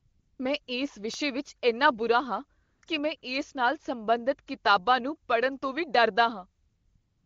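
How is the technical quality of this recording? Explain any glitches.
The recording has two kinds of glitch: patches of AMR comfort noise and a short burst of CD scratch ticks. The wideband speech coding itself sounds clean, consistent with a high AMR-WB rate.

AMR comfort noise appears at 0.00–0.39 s, 2.63–2.81 s, 2.85–2.87 s, 3.17–3.21 s and 6.63–7.26 s. Speech frames stopped, so the receiver synthesized smooth, steady noise in place of the real background.

CD scratch ticks are three sharp clicks between 1.14 s and 1.48 s, each under a millisecond. A disc blemish recurs once per rotation, beyond what the error correction can repair.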